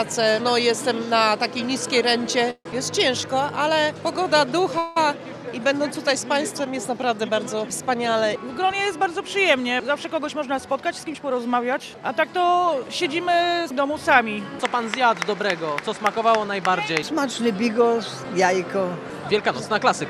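Call audio freezes occur at 2.50 to 2.66 s and 4.78 to 4.97 s. The sound stalls into a fading buzz for about 148 ms, ending in 60 ms of silence, and then for 177 ms. Delayed packets likely emptied the jitter buffer, and playback resumes where it stopped, with nothing lost.

A jitter buffer speed-up runs from 10.18 to 11.81 s. The receiver trims short pitch-period pieces, around 150 ms in total, to shed excess buffered delay. The audio plays at about 110% speed with unchanged pitch and sounds hurried.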